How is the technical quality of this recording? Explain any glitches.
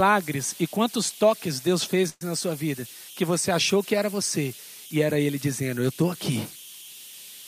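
Two faults affect the recording: a constant tonal whine and one brief stall in the speech.

Throughout the clip, a whistle near 3 kHz sits in the pauses, with grainy noise under quiet passages at about 19 dB below the speech. These are converter idle tones. An undithered delta-sigma converter settles into repeating bit patterns on small inputs, producing a steady tone.

From 2.09 to 2.23 s, just before "na sua", the speech halts. The last sound is continued and fades, filling about 116 ms, including roughly 30 ms of silence, then speech resumes with nothing lost but now 116 ms later. This call audio freeze was likely caused by delayed packets emptying the jitter buffer, so the receiver stretched the last sound until they arrived.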